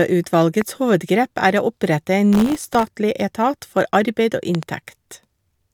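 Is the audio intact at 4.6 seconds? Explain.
No. A sudden voltage step or pulse, likely from a plug, switch, static discharge or driver glitch, enters the chain just after "arbeid og", from 4.55 to 4.65 s. It sounds as a loud pop, two sharp hits roughly ten decibels above the speech, which continues underneath.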